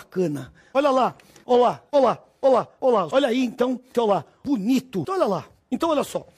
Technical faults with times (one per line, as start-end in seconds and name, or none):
1.73 block of digital silence